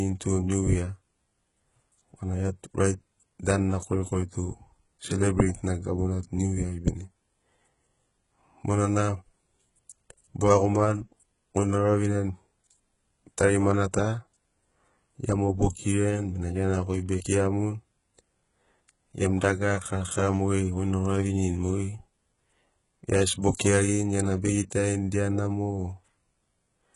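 Right from the start and all the way through, the speech has the thin, synthetic top end of heavy HE-AAC compression, likely at a very low bitrate somewhere around 12 kbps. The upper band isn't the real signal. It's rebuilt from copies of the lower band, so its harmonics don't sit where they should, and the s sounds come out gritty and lispy, with a metallic sheen. There's nothing at all above about 11.1 kHz.

At 23.42 s there's a brief pre-echo. A sharp onset lands late in a coding block, and the noise budgeted for that loud attack gets smeared backwards into the quiet moment just before it. You hear a short hiss creeping in roughly 14 ms ahead of the attack, which takes the edge off the transient and makes it sound softened rather than crisp.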